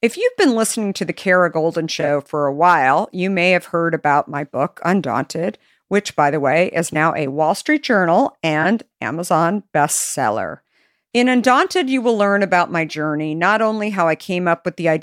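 At 2.00 s, just before "for a while you", the speech is disrupted for about 84 ms, the length of roughly four AAC frames. Corrupt frame concealment is at work: the decoder detected damaged frames and masked them by muting or substituting a scrambled copy of the last good spectrum. Shorter disruptions follow at 6.93 s, after "by the way is", lasting about 32 ms, and at 8.62 s, lasting about 36 ms.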